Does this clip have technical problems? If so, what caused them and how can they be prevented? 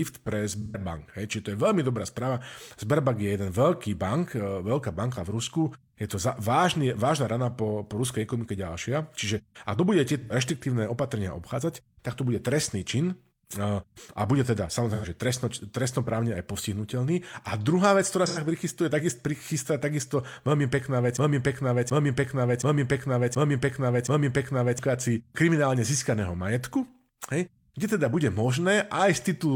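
Yes. In the AAC frame loss with concealment, compressed frames never reached the decoder, so it patched each gap by rebuilding audio from the last good spectrum. This is heard as short smeared, noisy or phasey patches at 0.61–0.80 s, 10.21–10.31 s (right after "ak to bude" and before "reštriktívne opatrenia obchádzať tak"), 14.94–15.06 s and 18.27–18.39 s. The first loss covers about 128 ms, which fits three frames, and the others about 85 ms each, which fits two. Adding forward error correction or retransmission with a larger jitter buffer would prevent these gaps.

The broken-record loop was likely caused by the player, encoder or stream stalling and resending the last fragment it held. From 21.17 s to 24.79 s, a 725 ms piece repeats exactly, back to back, five times, and the audio that should have played during those seconds is lost. Watchdogs that detect a stalled buffer and flush or resynchronise it, rather than replaying old data, would prevent this.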